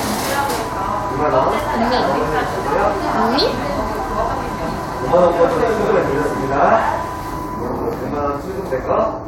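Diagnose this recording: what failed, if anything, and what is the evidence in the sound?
Nothing in the chain can be heard to have failed: the everyday sound arrives with a continuous, stable signal and no audible sign of trouble at any stage from capture to playback.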